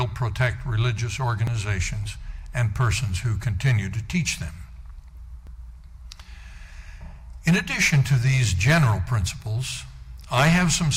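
Overlap between stream segments: overlapping time stamps on 4-second segments make the player trim real audio, so the waveform jumps in a tiny skip at 1.47 s and 5.47 s.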